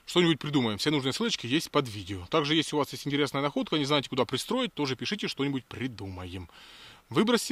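No faults are audible anywhere in the clip.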